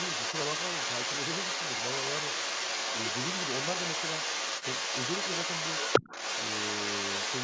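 A speech clip with the other side's voice leaking through from start to finish, somewhat louder than the talker, likely from incomplete echo cancellation; a spectrogram shows overlapping harmonic patterns throughout, with all energy stopping at 8 kHz.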